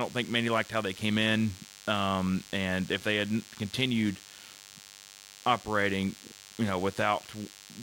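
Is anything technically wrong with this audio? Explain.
Yes: DECT cordless phone buzz runs throughout the speech, a thin, steady 100 Hz buzz with lots of harmonics. A nearby DECT handset or base bursts every 10 ms, and the audio circuit rectifies it into sound, sitting about 20 dB under the voice.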